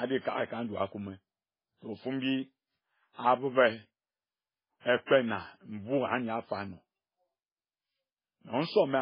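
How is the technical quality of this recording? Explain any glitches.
Technical quality is poor, with heavy codec damage throughout and two smeared attacks.

Throughout, the sound is watery and swirly with nothing above 5.2 kHz, which fits MP3 compression at a very low bitrate around 16 kbps as the likely cause. A spectrogram shows a hard ceiling and flickering gaps.

Pre-echo appears at 4.80 to 4.86 s (57 ms) and 5.06 to 5.11 s (50 ms). Block-wide quantisation noise leaks ahead of each attack, so a short hiss precedes it, visible as a smudge before the onset.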